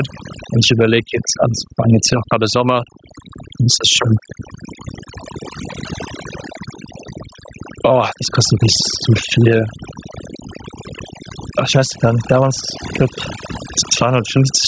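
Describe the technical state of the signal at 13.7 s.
At 13.7 s the speech is still under the overdone noise removal that runs through the whole clip. A noise reduction stage pushed too hard is cutting individual frequency bands whenever they sit close to its noise estimate, and the softer parts of the voice are caught along with the noise. The background drops and breaks up into twinkling specks, and the voice's content ends below 8 kHz from the call's microphone processing.

Gain pumping is also present there and throughout. The likely cause is input gain set far too high for the microphone, with a fast limiter or compressor clamping down on each loud sound, swinging the gain by roughly 15 dB. Loud and quiet passages end up squeezed close together in level, so the speech sounds squashed.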